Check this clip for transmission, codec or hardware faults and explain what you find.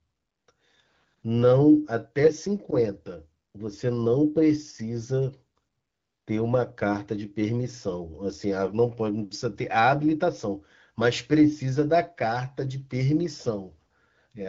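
One transmission fault appears: AMR bit errors from 2.24 to 2.31 s. This is a roughly 70 ms burst, which fits three corrupted 20 ms frames. About 5 percent of the weakly protected bits flipped, so pulse positions and fine pitch, gain and spectral values decode wrongly. The sound turns briefly hoarse and gargly at similar pitch and level. On a spectrogram the harmonics blur into blotchy noise. The waveform keeps its envelope but loses its regular periodicity. The surrounding AMR-WB coding at 12.65 kbit/s shows only light codec damage.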